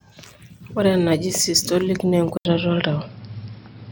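At 2.37 s the speech cuts out for 80 ms and returns duller and boxier, with a slight level shift and a faint new hiss, likely from the input switching to a poorer device. A spectrogram shows everything above 5.4 kHz vanishing there, and the waveform shows a gap.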